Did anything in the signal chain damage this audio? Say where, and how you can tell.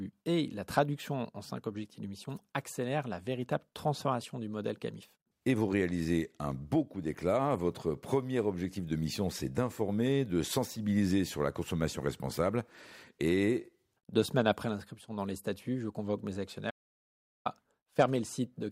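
Yes: an audio dropout to silence from 16.71 to 17.46 s, about 0.75 s of silence without room tone, likely a lost input link or device while recording continued.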